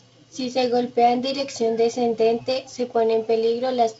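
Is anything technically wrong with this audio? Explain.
No, the speech comes through G.722 wideband telephone coding with content reaching about 7.7 kHz and the light coding grain that path leaves in its bands, and nothing else in it is amiss.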